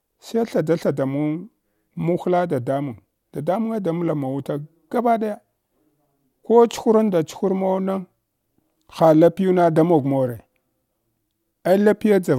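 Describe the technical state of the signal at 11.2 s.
At 11.2 s the speech signal is intact, with no dropout, clipping, glitch or other fault at that point.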